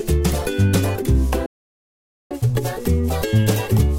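At 1.46 s the audio cuts out and stays silent until 2.31 s, a gap of about 0.85 s in the middle of the flow. This is a playback stall. The likely cause is that the player either ran out of buffered data or had its playback thread held up. While it waited, nothing reached the output, so the sound simply stops rather than fading or breaking up.

From 2.31 s to the end of the clip, the sound runs fast and sits higher in pitch, by roughly a semitone and a half. This is catch-up at higher speed. After the gap, the player works through its backlog by resampling at 1.1 times normal speed, which raises tempo and pitch together. It is still playing at this faster rate when the clip ends, so it never returns to normal within the audio.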